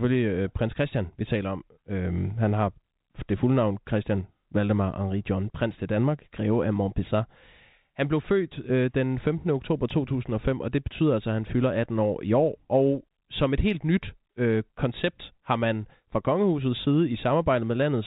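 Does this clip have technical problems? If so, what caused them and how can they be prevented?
No, this clip has no technical problems, so there is nothing to prevent.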